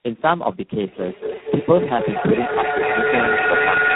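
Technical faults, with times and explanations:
Throughout: tandem speech coding. The speech crossed a chain of separate speech codecs, each decoding and re-encoding the output of the one before: G.729A at 8 kbit/s, iLBC at 13.33 kbit/s and finally G.726 at 24 kbit/s, with G.711 links in between. The losses compound at each stage, so the speech sounds rough, muffled and warbly. Nothing is left above 3.8 kHz, which dulls the consonants.
0.77 s to the end: feedback echo between two devices. Two devices in the same room were on the call, and each played back what the other's microphone had picked up. Neither echo canceller removes sound played by the other device, so the speech circulates with repeats roughly every 200 ms. The loop gain is high, and the returns reach about 1 dB above the direct speech. The repeats therefore build up into a thin, ringing pile instead of fading away.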